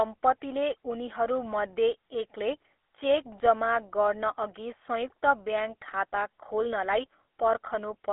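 From start to finish, the speech carries GSM full-rate codec damage. The band is narrow, from about 300 Hz to 3.5 kHz, with nothing above 3.8 kHz. The codec models the vocal tract as a filter. It then rebuilds the excitation from a sparse train of regular pulses, dropping most of the fine detail. That coarse excitation gives the speech a plainly audible buzzy, gravelly roughness. The sound fits a 13 kbps GSM stream.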